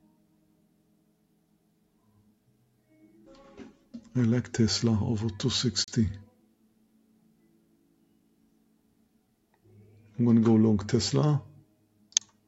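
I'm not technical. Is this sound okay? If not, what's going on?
No. A noise suppressor built for voice calls was left running on this sound, so it treats steady tones and lingering tails as background noise and keeps pulling them down. The level sways up and down by a modest amount throughout, and held parts sound thinned or pumping.

In four stretches, the sound was cut by the noise suppressor much harder than elsewhere: 0.01 to 3.24 s, 3.71 to 4.11 s, 6.25 to 9.18 s, and 11.63 s to the end. Sustained and fading parts sink noticeably there, while sharp onsets still get through.

Between 5.84 and 5.88 s, the sound drops to silence for about 35 ms and then resumes. That brief gap is likely a Bluetooth stall, where wireless interference delayed data and the headphones ran out of audio for a moment.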